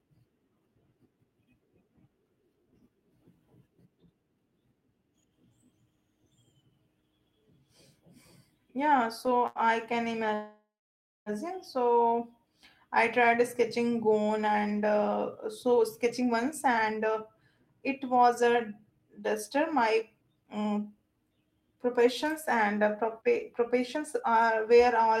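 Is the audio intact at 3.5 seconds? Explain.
Yes, the audio is intact at 3.5 seconds, with no audible fault at that moment.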